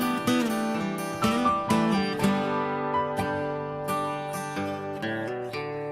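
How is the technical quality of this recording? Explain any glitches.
The recording starts clean but degrades for most of its length. From 1.12 s to the end at 5.91 s, an adaptive stream at a lower bitrate takes over. The connection slowed, so the player switched abruptly and without a gap to a leaner encode. This fits a step down from 96 kbit/s AAC to 24 kbit/s HE-AAC. Codec artefacts grow more audible.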